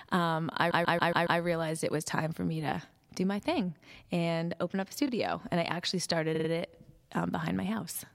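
Repeated frames stutter at 0.70–1.40 s before "it was time for" (a 139 ms block replayed five times), at 5.06 s after "and open up a", and at 6.34–6.48 s after "I actually started". Unlike a dropout, identical sound replays, lengthening the audio.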